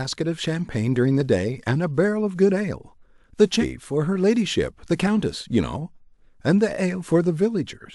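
Clock drift buffer slips start at 1.21 s and recur about every 2.05 s until 7.12 s, as regular clicks. These likely come from two mismatched clocks, roughly 150 ppm apart, forcing a handful of samples to be dropped or repeated.

Compressed frames skipped at 3.60–3.64 s produce a break where the speech jumps ahead by roughly 200 ms, consistent with about five missing 46.4 ms frames.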